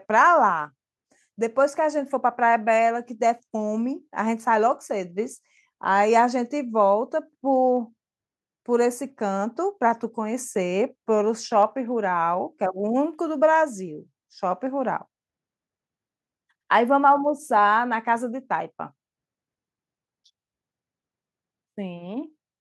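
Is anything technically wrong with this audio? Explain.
Yes. Clock slip clicks run from 0.13 s to 22.58 s, a fast, regular ticking that blurs into a soft rattle, hundreds of ticks in all at roughly 25 per second, heard on the louder, sustained parts of the speech and gone in the pauses. The likely cause is two devices running on unsynchronised clocks about 500 parts per million apart, so the gap grows by a whole sample every 40 ms or so and a single sample is dropped or repeated each time.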